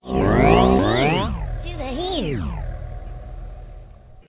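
No technical faults can be heard anywhere in this audio. The sounds come through with nothing breaking into them.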